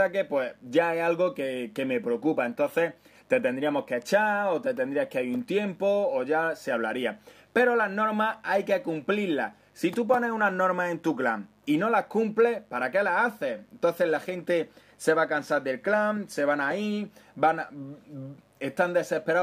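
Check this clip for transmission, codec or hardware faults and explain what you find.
One hardware fault runs through the whole clip: mains buzz. A steady, raspy buzz sits under the sound from start to finish, roughly 40 dB below the main signal, so it is quiet but persistent. It is built on 50 Hz mains, with harmonics stretching up into the kilohertz range. Sharp switching spikes, from a dimmer, a rectifier or an unshielded cable, leak into the signal path twice per mains cycle, giving the buzz its gritty edge rather than a smooth hum.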